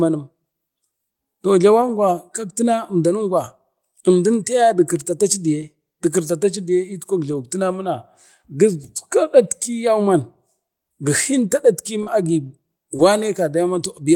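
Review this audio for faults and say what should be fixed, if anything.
Lost packets rebuilt from error correction appear at 1.81–1.83, 5.61, 7.31, 12.06–12.08 and 12.98–13.00 s. Each is a single 20 ms stretch that the decoder replayed from a low-bitrate copy carried in the next packet. There is no gap, only a brief rougher, noisier patch. That continuous but coarse texture separates it from concealment. More network headroom or a larger jitter buffer would let the original packets arrive intact.

Short concealed packet loss occurs at 12.03–12.08 and 12.96–13.00 s. The receiver first extrapolated the preceding speech for about 28 ms and 22 ms, then blended into the rebuilt copies. This gives a brief smear or wobble rather than the grainy roughness of the error-correction frames. A deeper jitter buffer would reduce these late-packet holes.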